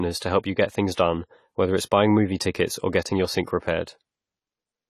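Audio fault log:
Throughout: AAC compression. The speech sounds dull and smeared, nothing is present above 14 kHz, and sibilants and held vowels carry a fizzy, warbling texture. This is likely AAC-LC working at a low bitrate, consistent with about 32 kbps, where the coder lowers its cut-off and quantises coarsely, leaving gaps in the spectrum. A simple low-pass filter would only dull the top end without this shifting, frame-to-frame swirl, which marks codec damage.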